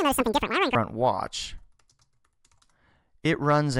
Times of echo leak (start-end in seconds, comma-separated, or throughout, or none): none